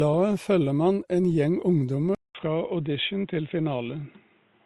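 From the start the speech has a layered texture: two kinds of compression artefact sit on top of each other, with nothing above about 18.4 kHz. This is transcoding between lossy codecs. The character fits a low-rate MP3 around 48 kbit/s re-encoded as Opus near 32 kbit/s. The second encoder spent bits reproducing the first one's artefacts and then added its own, and the lower top-end limit carried through.

At 2.15 s there is a gap of about 200 ms. After it the speech is suddenly dull and boxy, with nothing above 3.8 kHz, and a faint new background noise sits roughly 40 dB below the speech. The loudness stays about the same. This fits the input being switched to a poorer device for the rest of the clip, likely a headset call profile or a lesser microphone with its own narrow band and noise floor.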